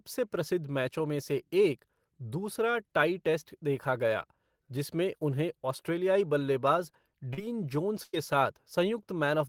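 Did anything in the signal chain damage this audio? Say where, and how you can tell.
Yes. At the network stage, short concealed packet loss dropped about 40 ms at 7.33–7.39 s, right after "जिसमें उन्हें ऑस्ट्रेलियाई बल्लेबाज"; the decoder extrapolated across it, leaving a brief smear.

Also at the network stage, a burst of packet loss removed about 100 ms at 8.03–8.15 s. Concealment stretched the last sound into a fading buzz or hiss before the audio resumed further on.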